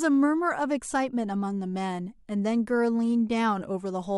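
Nothing goes wrong anywhere in this bit of speech, so there's no technical fault to point out.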